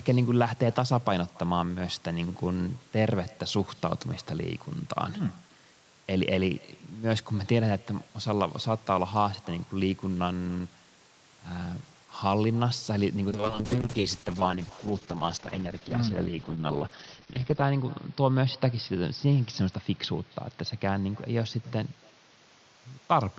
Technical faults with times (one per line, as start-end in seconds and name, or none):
0.00-23.38 echo with no canceller
13.30-23.38 call bitrate drop